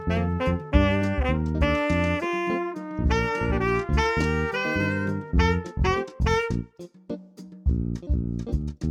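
No dropouts, glitches or other technical faults turn up anywhere in this recording, so there's nothing to flag here.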